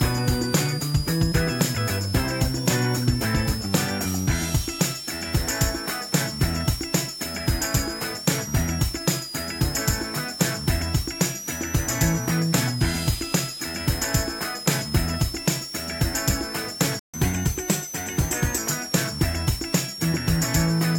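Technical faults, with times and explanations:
Throughout: switching supply whistle. There's a thin high whistle sitting around 5 kHz, wandering between roughly 4.7 and 6.0 kHz, at around 10 dB below the main signal. That's a switching supply running in an audible burst mode or beating with another supply, its pitch moving as the load shifts.
16.99 to 17.14 s: playback stall. The sound just drops out mid-flow for about 145 ms, then picks back up. Most likely the player ran dry of data or its thread got blocked, so the output sat silent until it caught its breath.
17.14 to 18.58 s: catch-up at higher speed. Right after the gap, everything runs at 1.1 times normal speed, with pitch up around a semitone and a half, then settles back. The player is resampling its backlog faster to claw back the time lost in the stall.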